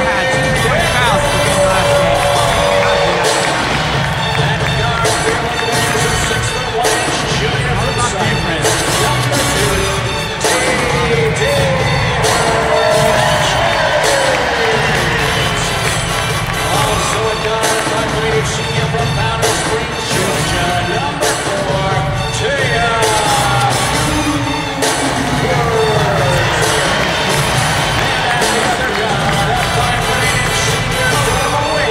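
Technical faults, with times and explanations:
Nothing to flag here, as no technical faults turn up anywhere in the clip.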